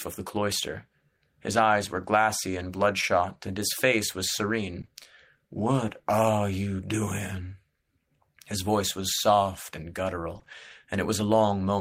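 Right after "and his face was", around 4.81 to 4.89 s, there's short concealed packet loss: two 20 ms chunks in a row never arrived, so the decoder stretched the previous sound over the hole and blended back. You hear it as a quick smear or wobble.

Then after "voice was soft and", at 10.35 s, one packet is a lost packet rebuilt from error correction, so it sounds rough and noisy. Right behind it, 10.39 to 10.47 s brings two more concealed 20 ms losses, and 10.47 to 10.53 s has another two packets rebuilt from the error-correction copies, about 40 ms of grainier audio.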